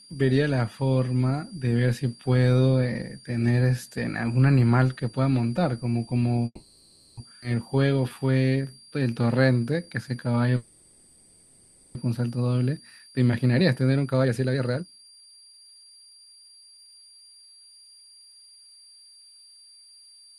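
A faint high whistle sits under the speech for the whole clip, at about 25 dB below the speech, its pitch wandering slightly between 4.70 and 4.75 kHz. This is a switching supply whistle: a switching power supply running in an audible burst mode, or beating against another, leaks its tone into the audio path.

From 6.45 to 7.19 s the sound stalls and trails off as a fading buzz, dropping to silence for its last 40 ms before the speech resumes where it stopped. This call audio freeze was likely caused by packets held up in transit, which emptied the jitter buffer. The receiver stretched the last sound to fill the 720 ms gap, so nothing is lost but the stream now runs later.

At 7.41–7.44 s the speech jumps forward almost seamlessly, with roughly half a second of audio gone and the two sides joined directly. This skip ahead happens when a stretch of audio is dropped while later audio is already queued, pulling the delay back down.

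From 7.69 to 10.51 s the speech drags at 87% speed with its pitch unchanged, sounds drawn out. This jitter buffer slow-down comes from the receiver repeating single pitch periods and bits of pauses to rebuild its reserve, adding 383 ms in all.

A second call audio freeze runs from 10.57 to 11.97 s. It holds the last sound as a fading buzz for 1.38 s without reaching silence, and the speech then continues intact. Here too the likely cause is delayed packets starving the buffer.

From 12.77 to 18.27 s the speech sounds hurried, running at 136% speed at the same pitch. This jitter buffer speed-up shows the receiver working off a backlog. It repeatedly removes short pieces of one or a few pitch periods, cutting roughly 2 s of audio to reduce the delay.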